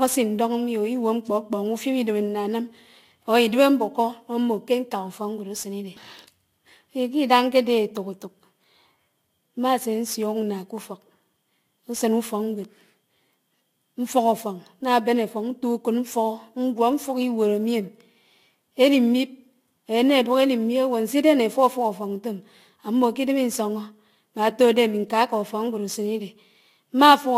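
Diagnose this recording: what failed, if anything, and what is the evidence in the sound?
Converter: sample clock jitter throughout. Mistimed samples err most on steep waveforms, so roughness tracks loud, bright speech, about 30 dB down, vanishing in pauses.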